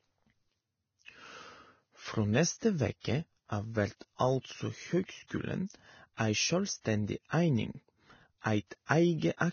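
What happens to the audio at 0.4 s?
Vorbis compression damage is present at 0.4 s, as it is across the whole clip. Nothing is heard above about 6.6 kHz, and the remaining treble is grainy and hissy, with roughened speech tones and blurred onsets. This is likely the result of heavy Vorbis encoding at a very low bitrate, near 18 kbps. At that rate the encoder lowers its cut-off and quantises the upper residue so coarsely that fine detail is replaced by noise of similar energy.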